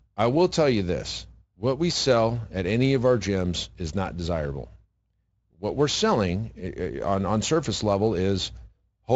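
Nothing stood out on listening to this speech; the Speex path at its high setting leaves no audible trouble.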